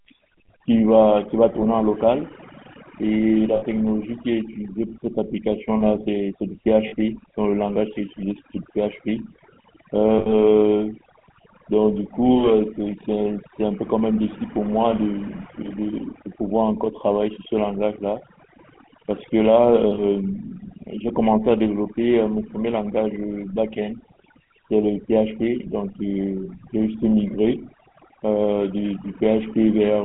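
From start to finish the speech carries two faults. The first is overdone noise removal. A noise reduction stage was pushed too hard, so any frequency band sitting near its noise estimate is cut almost to nothing, and the quiet edges of the speech go with it. The background collapses into near silence dotted with twinkling specks. Unlike plain low-level hiss or band-limiting, the damage flickers band by band over time.

The second is the GSM full-rate codec, at 13 kbps over a telephone band of roughly 150 Hz to 3.4 kHz. This codec rebuilds speech from a vocal-tract model excited by sparse, evenly spaced pulses. Here that gives a plainly audible buzzy, gravelly roughness laid over everything, with nothing above the band. The noise-removal artefacts come and go with the background level. The codec's grain stays steady and sits inside the speech itself.

Lost GSM frames occur at 3.56 to 3.63 s, 6.88 to 6.94 s, 10.18 to 10.33 s and 19.94 to 20.0 s. 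Each time, the decoder replays the last good frame's settings. The result is a brief, rough metallic ring rather than silence or a click. The gap at 10.18 s is the longest, spanning about 0.15 s, with four 20 ms frames, 80 ms of audio, lost. A plain dropout would go dead instead, and a click would not hold a pitch.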